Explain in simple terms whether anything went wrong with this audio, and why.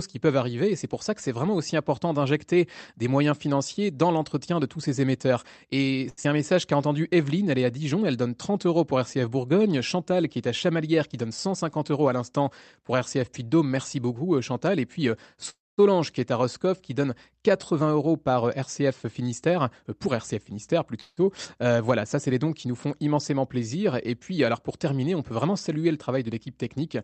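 Around 6.1 seconds there is a short stall from a late packet. One piece of the call arrived late and the receiver's waiting buffer ran dry, so from 6.09 to 6.19 s it stretched the last sound for about 80 ms. The speech pauses briefly, with nothing lost.

Right after comes a short concealed packet loss, at 6.23 to 6.26 s. About 40 ms of the call never arrived in time. The receiver patched the hole with a guess based on the preceding sound, which gives a tiny smear or wobble.

The speech then gets two jitter buffer speed-ups. Too much audio had piled up waiting, so the receiver trimmed small slices to catch up. From 11.05 to 11.65 s, just before "euros à l'instant pour", the speech runs about 11% faster at the same pitch, losing roughly 70 ms. From 17.74 to 20.95 s, between "qui donne" and "voilà ça c'est les", it runs about 5% fast and loses roughly 200 ms, so it sounds slightly hurried.

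There are two call audio freezes, likely caused by packets being held up on the way. From 15.50 to 15.80 s the sound fades to silence for about 0.22 s before continuing where it stopped. From 21.00 to 21.19 s, just before "voilà ça c'est les", a similar gap of about 0.17 s is mostly filled by a fading held sound. The call's audio itself stops at about 8 kHz, which is normal for this kind of call connection.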